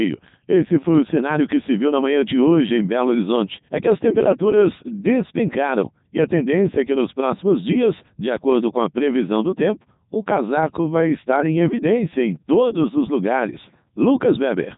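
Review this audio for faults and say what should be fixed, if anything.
Codec 2 vocoder damage runs through the entire speech clip. The voice is rebuilt from sine waves driven by pitch, voicing, energy and a spectral envelope rather than the original waveform, so it comes out heavily robotic and buzzy, which fits the 3.2 kbit/s mode. On a spectrogram the content stops sharply at 3.8 kHz, and harmonics appear as unnaturally regular stacked lines with smeared consonant noise. The waveform looks synthetic and periodic. To prevent this, capture or transmit the speech with a wideband codec instead of Codec 2.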